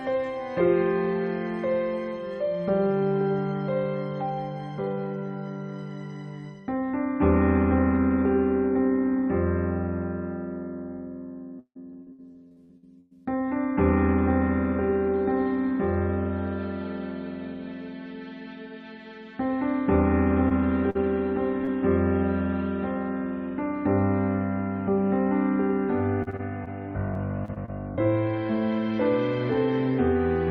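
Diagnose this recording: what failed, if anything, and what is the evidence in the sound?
Network: repeated packet loss at 11.59–13.13 s, 26.23–26.68 s and 27.14–27.99 s. The receiver keeps extending the last sound across gaps up to 158 ms, so the sound turns choppy and robotic.

Network again: short concealed packet loss at 20.49–20.52 s, 20.90–20.97 s and 21.65–21.69 s. Each hole of 20–40 ms is bridged from the preceding sound, leaving brief smears or wobbles.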